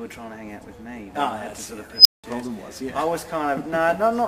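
At 1.96 s a recursive filter goes unstable: its coefficients place it past the point where feedback dies away, so each pass through the loop feeds back more energy than the last. The result is a high tone around 5 kHz that swells over about 89 ms into a loud, clipped squeal, then the arithmetic overflows and the output drops out for about 186 ms, leaving silence until the filter resets at 2.24 s.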